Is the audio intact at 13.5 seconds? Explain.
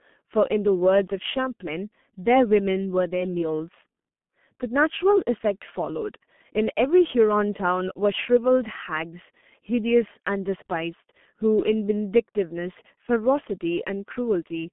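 No, not really. At 13.5 s you're hearing the G.723.1 codec, which runs through the whole clip. It squeezes the speech to about 6.3 kbit/s in 30 ms frames, so its model of the voice updates slowly and can't keep up with fast changes. The line band is roughly 150 Hz to 3.5 kHz. The damage is heavy: the speech comes across muffled and hoarse, and the consonants smear together.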